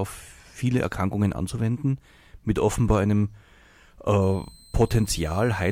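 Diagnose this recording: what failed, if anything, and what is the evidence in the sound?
Switching supply whistle in the analogue power side: from 4.22 s to the end, a faint whistle around 4 kHz, drifting 4.10–4.16 kHz, roughly 30 dB under the speech, from a supply running in audible burst mode or beating with another supply.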